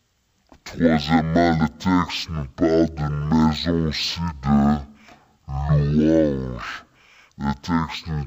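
From the first moment to the end, the speech runs at half speed and sits a full octave low, a drop of 12 semitones, because of stereo read as mono. The left and right samples, which alternate in the file, are being played one after another as if they were a single channel. What separates this from a simple sample-rate mismatch at half speed is the faint mirrored copy of the sound in the upper half of the spectrum.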